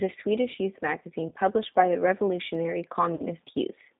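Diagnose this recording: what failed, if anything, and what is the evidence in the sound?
The codec stage shows G.729 coding throughout. The speech is confined to about 150 Hz to 3.7 kHz, with a plainly audible rough, synthetic texture. At 8 kbit/s the decoder rebuilds every 10 ms frame from a vocal tract filter, a pitch predictor and sparse pulses, discarding fine detail.

The network stage shows VoIP packet loss concealed by the speech codec, at 1.29–1.33 s, just before "published by the", and at 3.15–3.24 s. Gaps of 20 ms and 40 ms were filled by a fading extension of the previous pitch and filter, and the sound stays weak briefly after each.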